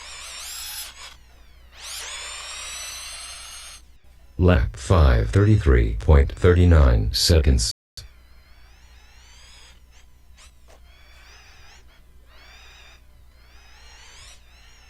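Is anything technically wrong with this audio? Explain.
Yes. A rebuffering stall occurs from 7.71 to 7.97 s. The player exhausted its downloaded audio and halted until more data arrived, inserting about 260 ms of silence. Playback then resumes exactly where it stopped, so nothing is skipped; the clip is simply stretched by that gap. On a waveform this shows as a flat, silent stretch with abrupt edges, and on a spectrogram as a clean vertical blank band across all frequencies.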